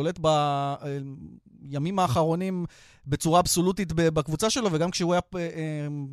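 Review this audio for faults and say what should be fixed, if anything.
Nothing in the signal calls for correction; the speech plays continuously with no audible dropouts, distortion or timing disturbances.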